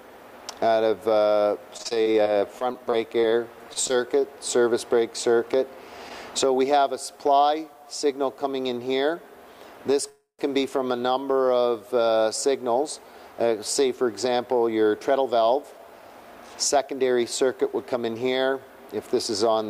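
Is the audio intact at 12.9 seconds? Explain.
Yes, at 12.9 seconds the audio is intact, with no dropout, glitch or other fault audible at that moment.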